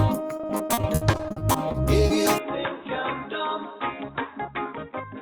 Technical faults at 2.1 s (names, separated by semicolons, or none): repeated packet loss (robotic sound)